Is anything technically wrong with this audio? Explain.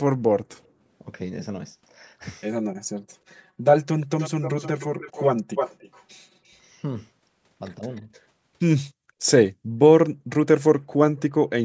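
Yes, this speech clip has three kinds of call-path fault.

Echo leak appears five times. At 0.51 to 0.57 s a faint copy, about 35 dB down, trails the voice by 145 ms. From 4.0 to 5.27 s, 5.55 to 6.03 s, 6.47 to 6.58 s and 7.96 to 8.21 s the copy lags by 305 ms, at about 15, 5, 40 and 35 dB below the speech. The strongest is around 5.6 s. The likely cause is a loudspeaker on one side whose echo canceller let part of its microphone pickup return down the line.

Channel delay (comb filtering) runs from 1.16 to 6.70 s. One channel reaches the mono sum roughly 5 ms late, so components shared by both cancel at regular intervals. The first notch falls near 100 Hz and further notches repeat every 200 Hz above it. The voice turns hollow and phasey across this stretch. The colouring stays fixed and does not sweep, because the delay does not change.

Speech suppressed in double talk occurs at 7.8 to 8.11 s and again at 11.1 to 11.2 s. 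The voice on the loudspeaker side dips by about 10 dB over roughly 150 ms in the first, and by about 15 dB over roughly 100 ms in the second. The likely cause is an echo canceller that could not separate the talker from loudspeaker echo while both sides spoke and attenuated everything. The call's band limit at 8 kHz is normal microphone processing.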